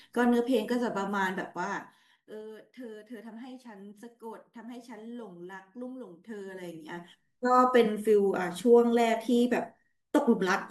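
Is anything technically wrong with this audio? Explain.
Yes. Zipper noise appears twice in this speech: from 1.32 to 2.52 s as the level drops by roughly 20 dB, and from 6.24 to 7.28 s as it climbs back by about the same amount. Each time a fast ticking rides on the voice, around seven ticks a second on the way down and about ten on the way up. The gain moves in unsmoothed 2 dB jumps, and each jump leaves a tiny click in the waveform.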